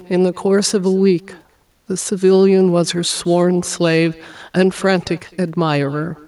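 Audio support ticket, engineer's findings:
Far end running loudspeaker playback with no echo canceller in the path; their microphone captures our outgoing audio and returns it over the network. Echo with no canceller, present throughout the speech. Every phrase shadowed by a delayed copy, roughly a fifth of a second behind, sitting about 26 dB under the direct signal. Returned copy thin from the loudspeaker-to-mic air path; low level but audible as a trailing double. Check far-end AEC enablement.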